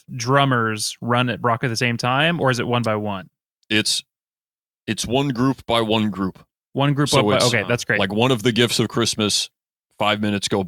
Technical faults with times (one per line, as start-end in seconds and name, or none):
none